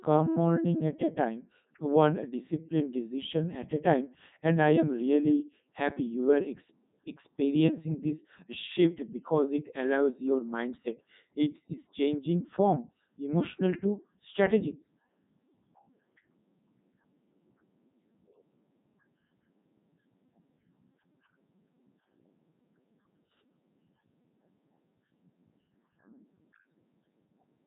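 From start to finish the speech carries Codec 2 vocoder damage, heavy throughout, with nothing above 3.8 kHz. The voice is rebuilt from sine waves using only pitch, voicing, energy and envelope data, so it sounds robotic and buzzy, consistent with Codec 2's top 3.2 kbit/s mode.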